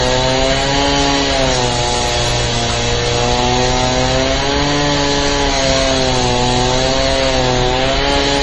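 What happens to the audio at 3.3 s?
At 3.3 s the audio is degraded by transcoding between lossy codecs, present for the whole clip rather than starting there. The sound was most likely encoded at a low rate, something like 32 kbit/s MP3, then re-encoded with Opus at a similar rate, which spent its bits on the first codec's smearing and added its own. Nothing remains above 11 kHz, so the sound is dull, with warbly, grainy texture from both codecs layered together.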